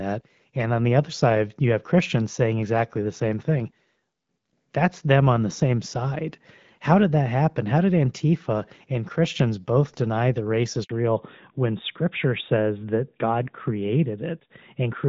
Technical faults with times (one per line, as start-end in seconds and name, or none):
10.83-10.89 handover gap
10.89-15.09 fallback to narrowband